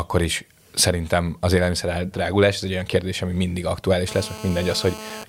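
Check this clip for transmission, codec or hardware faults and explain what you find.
One hardware fault is present: GSM phone buzz from about 4.08 s to 5.24 s, starting right after "olyan kérdés ami mindig". A nearby 2G handset in a call transmits in bursts about 217 times a second, and the audio circuitry rectifies those radio pulses into a raspy, harmonic-rich buzz about 14 dB below the speech. It stays steady throughout, as it does during a call. Unlike mains hum, its fundamental is not a multiple of 50 or 60 Hz, and it sounds gritty rather than tonal.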